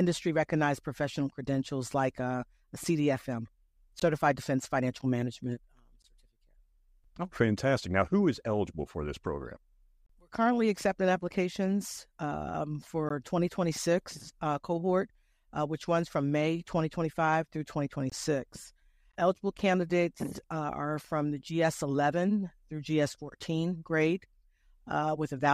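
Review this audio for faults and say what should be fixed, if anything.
Gaps between stream segments occur at 4.00–4.02, 5.02, 6.02, 7.04, 10.06–10.10, 13.09, 18.10–18.12 and 19.12 s. Each is a hard-edged silent hole of about 5 to 31 ms, falling on whole-second boundaries, which fits 1-second segments whose timestamps leave small holes that the player fills with silence. Fix the segment timestamps so each segment starts exactly where the previous one ends.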